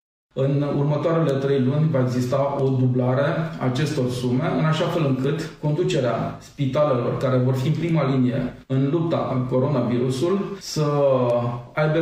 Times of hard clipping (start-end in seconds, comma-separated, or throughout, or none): none